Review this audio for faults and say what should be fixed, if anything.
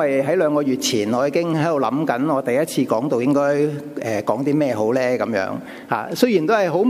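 No technical faults can be heard anywhere in the recording, so nothing needs fixing. No remedial processing or re-capture is called for.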